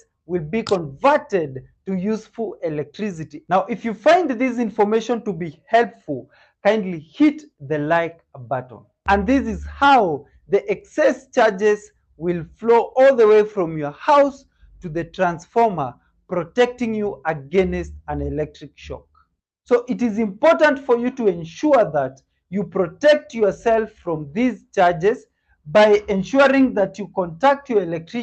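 No technical faults can be heard anywhere in it.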